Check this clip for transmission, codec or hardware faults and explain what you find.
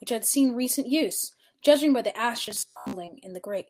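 Two faults are audible in this speech clip.

From 2.43 to 2.93 s the voice turns into a rigid, metallic buzz fixed at about 66.7 Hz, loosely tracking the speech. This is robotic sound from repeated short buffers, likely caused by audio arriving too slowly, so the software repeated roughly 15 ms chunks for most of that stretch while skipping the real audio.

From 3.05 to 3.09 s there is a brief smear where the sound briefly wobbles before settling. This is short concealed packet loss: about 20 ms of audio failed to arrive, and the receiver covered roughly 17 ms of it by extending the preceding sound before blending back in.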